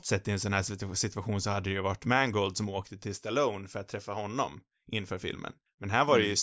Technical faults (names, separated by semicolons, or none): none